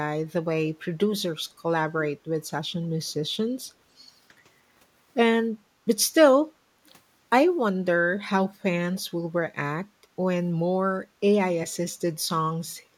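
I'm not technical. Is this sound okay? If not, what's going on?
No. At 3.08 to 3.12 s and again at 6.86 to 6.9 s there's a very faint, brief repeat of the speech, trailing about 0.3 s behind. This is an echo leak, likely from a loudspeaker on the other end whose echo canceller let some of its own sound slip back.

At 9.89 to 10.0 s the room background briefly sinks, for about a tenth of a second, then returns. That's background gated by the echo canceller: it turned the microphone down sharply while the loudspeaker played.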